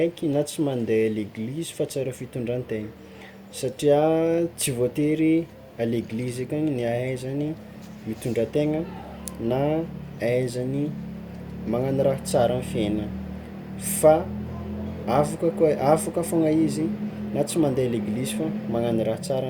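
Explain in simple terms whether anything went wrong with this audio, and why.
Nothing stood out as wrong when listening to this speech recording.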